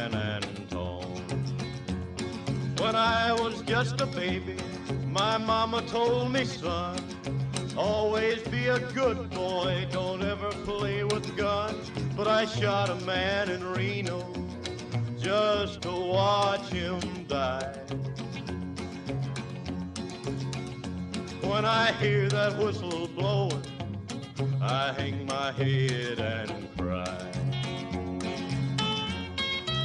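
No technical faults can be heard anywhere in this recording.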